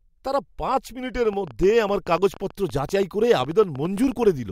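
Likely interference from nearby equipment or a faulty connection or power supply injects a train of clicks from 1.25 s to 4.24 s: around thirty similar pulses at about 9.4 per second, unevenly spaced, roughly as loud as the speech, ticking over it and through the pauses.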